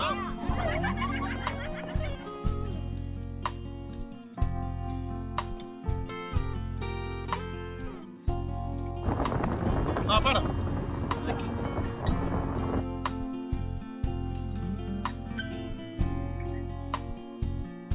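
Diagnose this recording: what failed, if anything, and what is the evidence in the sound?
Nothing failed in this recording.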